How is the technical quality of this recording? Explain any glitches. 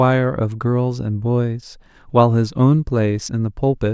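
No glitches or technical faults can be heard anywhere in the recording, and the signal stays continuous and stable throughout.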